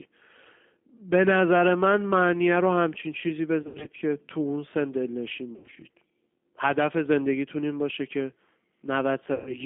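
Throughout, the speech carries G.729 codec damage: an 8 kbit/s model-based coder rebuilds each frame from a filter, a pitch predictor and a few pulses, so the band is confined to roughly 200 Hz to 3.5 kHz, with a plainly rough, synthetic texture. Packet loss concealed by the speech codec interrupts it three times. From 3.63 to 3.89 s and from 5.56 to 5.78 s, 140 ms of audio is missing in scattered runs of up to 80 ms. At 9.34 to 9.56 s, 120 ms is missing. Each time the decoder stretches its last pitch and filter into a buzzy tone or coloured noise that fades before recovering.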